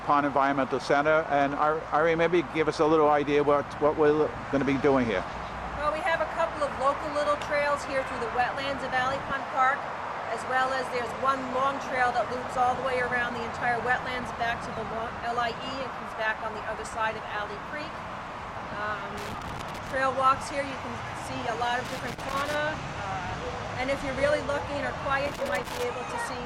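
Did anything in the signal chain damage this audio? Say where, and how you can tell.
Yes: loose connector crackle in the analogue wiring, in bursts at 19.18–19.96 s, 21.85–22.57 s and 25.26–25.83 s. A worn contact intermittently breaks the signal, so the waveform shows ragged gaps, and the spectrogram shows irregular broadband vertical streaks.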